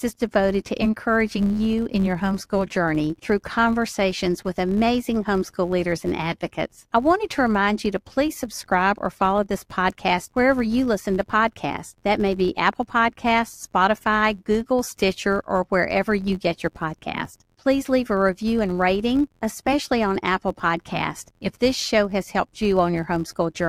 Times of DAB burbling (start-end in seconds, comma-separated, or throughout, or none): none